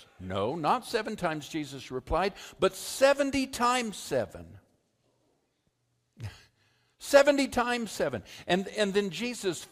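No technical faults are audible anywhere in the recording.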